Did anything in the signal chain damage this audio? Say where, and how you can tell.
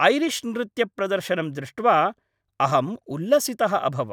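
No, nothing in the signal chain has damaged this speech recording. Listening across the whole clip, no stage from capture through to playback leaves an audible mark on it.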